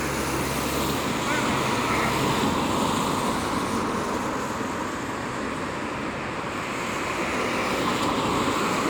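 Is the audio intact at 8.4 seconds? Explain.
Yes, the sound is intact at 8.4 seconds, with no dropout, distortion or other fault to be heard there.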